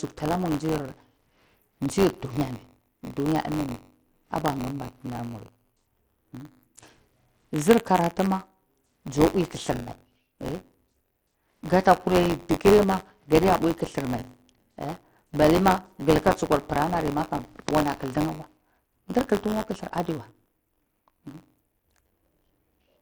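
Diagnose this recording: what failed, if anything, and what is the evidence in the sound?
Bluetooth SBC compression, throughout the speech: the treble thins and flickers, and a gritty, aliased grain sits on the sound. The codec stage is the likely cause. Its eight coarse sub-bands starve the top bands of bits, and the damage fits a low bitrate near 80 kbps.

Buffer tearing, throughout: a robotic buzz at 93.8 Hz rides on the speech and is present only while there is signal. This is a driver or buffer fault. Writer and reader have slipped, so a small slice of each period, roughly a fifteenth, replays audio about 20 ms old, with hard joins at each end. The rate fits a 512-sample buffer.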